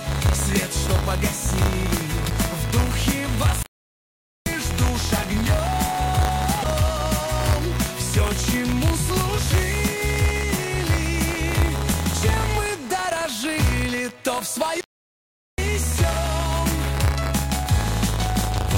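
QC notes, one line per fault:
Throughout, buffer tearing. A rattling, robotic buzz at 100 Hz sits on the sound and only appears while signal is present. The writer and reader of the playback buffer have slipped out of step, so a small slice of each 10 ms period, a few percent, repeats audio from roughly 40 ms earlier, with hard joins either side.
3.63 to 4.46 s and 14.81 to 15.58 s, playback stall. The sound cuts out mid-flow into silence for about 0.83 s, then for about 0.77 s, before resuming. The likely cause is the player running dry of data or its thread being blocked, leaving nothing to output until it recovered.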